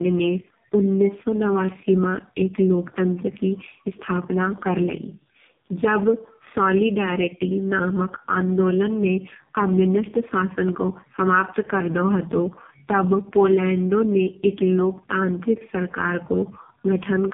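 From start to finish the speech sounds rough, muffled and warbly, with nothing above about 3.7 kHz. This is tandem speech coding: the sound fits two passes through AMR-NB at 5.9 kbit/s with G.711 A-law between them, each coder compounding the previous one's damage.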